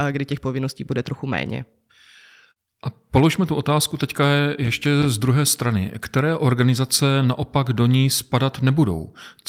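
No technical faults are audible.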